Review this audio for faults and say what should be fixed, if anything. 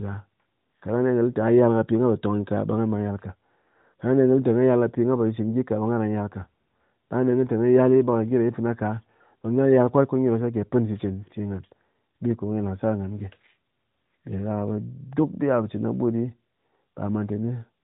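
Nothing stood out on listening that needs fixing; the speech comes through the AMR narrowband mobile codec at 12.2 kbps with nothing above 3.8 kHz, as that path is meant to work.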